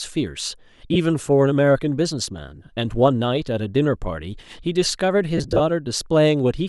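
Lost LE Audio frames at 0.93 s and again from 5.38 to 5.61 s break up this speech clip. The LC3 decoder fills each gap by reusing the last spectrum with randomised signs, so the sound turns into a brief noisy smear. The first dropout lasts about 22.5 ms, which fits three 7.5 ms frames. The second is scattered over 225 ms, with 135 ms missing in total and the longest run around 30 ms, leaving a patchy, hissy stretch.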